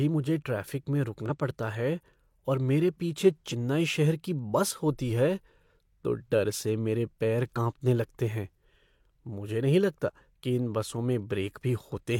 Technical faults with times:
1.26-1.31 damaged data in a compressed stream
3.49-3.54 damaged data in a compressed stream
7.53-7.58 damaged data in a compressed stream
10.03-10.10 damaged data in a compressed stream

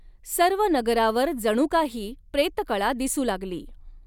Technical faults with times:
none

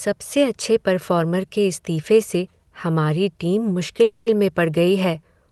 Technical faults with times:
4.03-4.29 call audio freeze

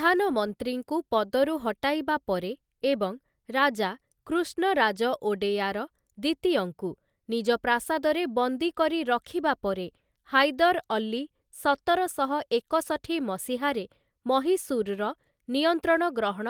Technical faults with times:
none

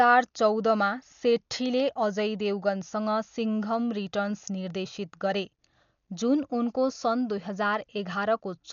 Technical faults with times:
0.00-8.72 Dolby Digital compression

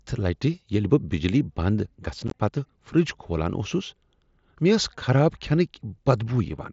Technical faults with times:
2.28-2.34 unconcealed Bluetooth headset packet loss

